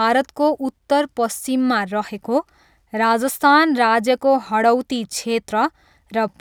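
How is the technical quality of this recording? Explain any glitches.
The technical quality of this speech recording is sound, with no glitches to explain.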